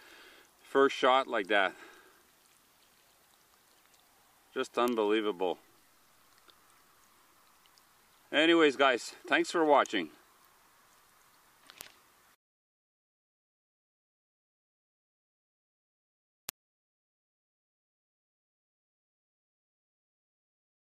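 Three bit error spikes, at 4.88, 11.81 and 16.49 s: single flipped samples jumping to about -11, -11 and -5 dBFS, each a sharp broadband tick.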